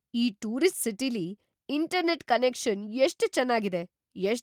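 No technical faults can be heard anywhere in the recording; the signal holds steady and continuous throughout.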